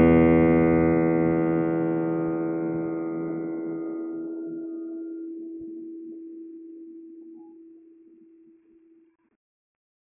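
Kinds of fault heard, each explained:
Nothing in this music stood out as a fault on listening.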